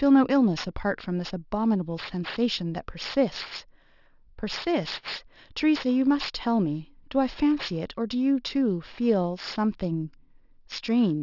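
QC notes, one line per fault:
Throughout, aliasing: sibilants and fricatives sound gritty and metallic, with harsh tones that do not follow the natural shape of the speech. The spectrum runs hard up to a band edge at 6 kHz, and the folded content sits roughly 15 dB below the speech. The sample rate appears to have been halved without a low-pass filter, pointing to a drop from 24 kHz to 12 kHz. Energy above 6 kHz was mirrored back down to false, unrelated frequencies.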